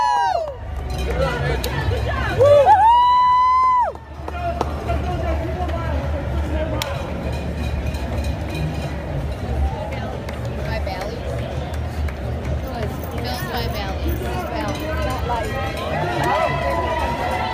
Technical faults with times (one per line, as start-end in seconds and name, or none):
none